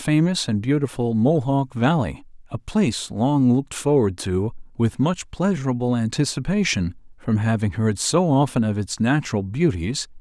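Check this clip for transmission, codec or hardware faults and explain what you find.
I hear nothing wrong anywhere in this recording.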